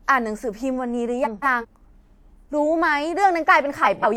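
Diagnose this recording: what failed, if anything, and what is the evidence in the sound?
Frames out of order in the network path: at 1.24–1.65 s and 3.84–4.16 s, two 0.19 s blocks swap places, giving a garbled flutter, which fits four-frame runs.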